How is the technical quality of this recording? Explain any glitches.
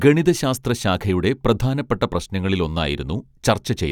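Nothing stood out on listening to this speech recording, so there are no glitches to explain.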